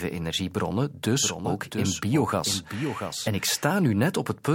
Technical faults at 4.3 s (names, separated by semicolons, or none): none